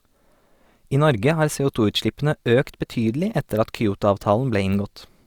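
Nothing in this speech recording stood out as a technical fault on listening.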